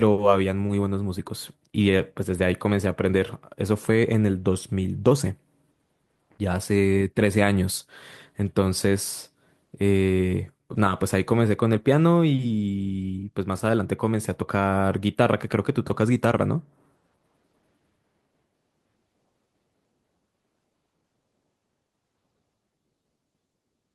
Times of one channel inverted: none

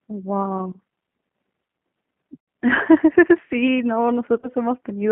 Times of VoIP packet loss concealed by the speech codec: 2.39-2.48, 4.40-4.51

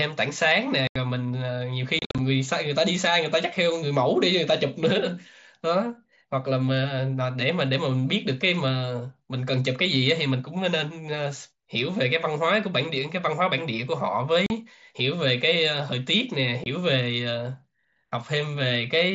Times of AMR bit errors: none

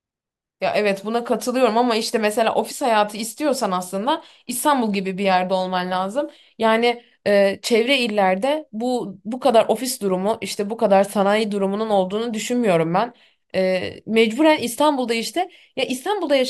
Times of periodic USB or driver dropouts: none

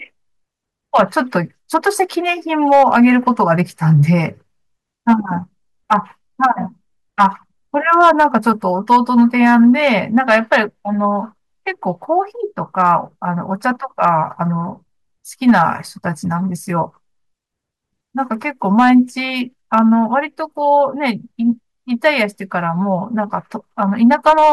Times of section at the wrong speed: none

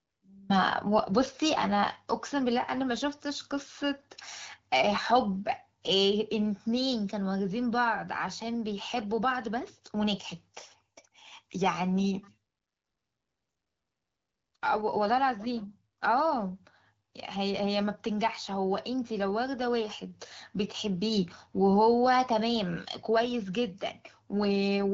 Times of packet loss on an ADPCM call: none

